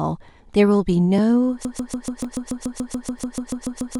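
At 1.18 s a block of digital silence drops the sound out for about 1.5 ms, which fits a 64-sample buffer left unfilled. Because the cut has no fade at either edge, it sounds like a sharp tick rather than an audible hole.

From 1.65 s to the end a broken-record loop takes over. The same 0.14 s fragment repeats exactly, back to back, most likely because the stream stalled and kept resending its last piece, so the speech that should follow is lost. Unlike an echo, each repeat is identical and nothing decays.

Two more digital-silence blocks fall inside the loop. The one at 2.24 s lasts 0.66 ms and gives a tick. The one at 3.19 s lasts 4.35 ms and is also heard as a tick or brief dip.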